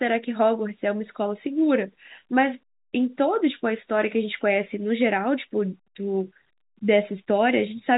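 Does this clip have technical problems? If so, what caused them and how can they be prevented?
No, no technical faults here.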